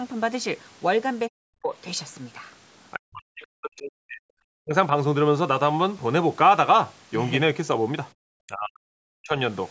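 From 1.29 to 1.72 s, 2.96 to 4.25 s, 4.46 to 4.74 s and 8.47 to 9.36 s, the echo canceller likely met double talk, with the far end and this talker speaking together. It could not tell the speech from loudspeaker echo, so it pulled down both. This is speech suppressed in double talk. The speech sinks by as much as roughly 40 dB, turning dull and choppy, with pieces missing for a fraction of a second up to over a second at a time.

From 8.14 to 8.19 s, the canceller clamped the microphone while the loudspeaker was active. This is background gated by the echo canceller. The room sound briefly drops by about 35 dB and snaps back within a few hundredths of a second. The call's microphone path, with nothing above 8 kHz, keeps a band-limited tone throughout.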